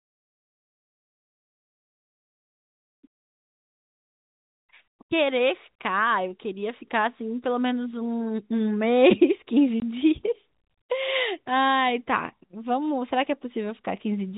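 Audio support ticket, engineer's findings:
Packet loss filled with silence at 9.8 s: one 20 ms hole, consistent with a single dropped packet. Flat gap in the waveform, hard edges on spectrogram. Band-limited G.711 telephone path below 4 kHz.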